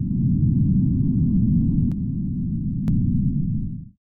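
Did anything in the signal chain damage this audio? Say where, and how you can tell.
Yes. From 1.92 to 2.88 s the sound abruptly drops about 6 dB, then recovers: one channel drops out, likely at a loose analogue connection, halving the mono sum.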